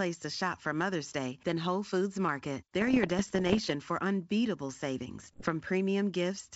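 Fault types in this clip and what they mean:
bit errors on an ADPCM link: Pops and rough, crackling bursts with brief jumps in level, first from about 2.81 to 3.73 s, ending just before "for unbeatable", then a shorter, denser patch from 5.20 to 5.49 s just after "for unbeatable". Flipped bits in the G.722 stream knock the decoder's step size and predictor off track, so each error rings on for some milliseconds. The second burst sounds like roughly twice the error rate of the first.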